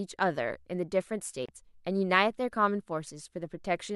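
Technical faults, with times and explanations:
1.46–1.49 s, Bluetooth stall: The speech cuts to silence for 29 ms, then resumes. The break is abrupt, not a fade. Interference likely held up the wireless packets, so the headphone buffer ran dry until resent data arrived.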